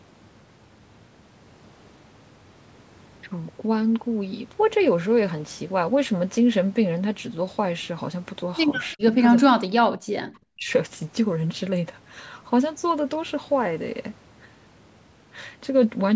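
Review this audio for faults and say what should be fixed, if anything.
Speech suppressed in double talk: the speech dips or cuts out at 8.94–9.16, 9.43–9.70, 10.15–10.23 and 10.49–10.69 s, by roughly 25 to 40 dB. The echo canceller likely mistook overlapping talk for echo and turned it down. Improving the echo canceller's double-talk detection would keep this speech at full level while the other side talks.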